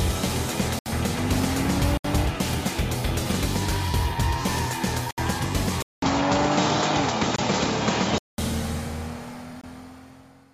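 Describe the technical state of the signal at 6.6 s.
At 6.6 s the audio is inside the span from 5.82 to 8.38 s, where the input likely switched to a poorer device. After a 200 ms flat gap in the waveform, the spectrogram shows nothing above 7.6 kHz. The sound turns duller over a new noise floor about 55 dB down, with no change in level.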